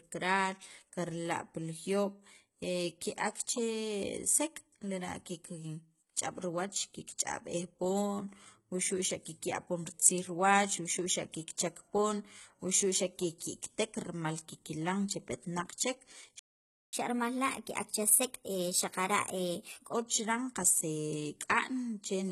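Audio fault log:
Throughout: HE-AAC compression. The treble sounds bright but synthetic, with s sounds turning gritty and lispy and a metallic sheen over the upper range. This likely comes from HE-AAC at a very low rate, fitting roughly 16 kbps. Only the lower band is truly coded. The top is rebuilt by copying lower bands upward under a coarse envelope, so the upper harmonics don't line up with the real ones.
16.39–16.93 s: playback stall. The speech cuts off mid-flow into about half a second of silence (0.54 s) and then carries on. The likely cause is the player running dry or its output thread being blocked. Output simply halts until data is available again, which produces a gap of silence.
16.93–19.93 s: catch-up at higher speed. Right after the gap, the speech rushes ahead for three seconds at 1.15 times normal speed, sounding hurried and raised in pitch by about two semitones, then settles back to normal at 19.93 s. 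The player is resampling its backlog faster to win back the time lost in the stall, and because resampling moves speed and pitch together, the voice rises as well as quickens.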